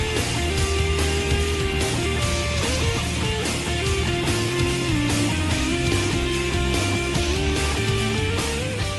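No faults detected in this audio; nothing to flag.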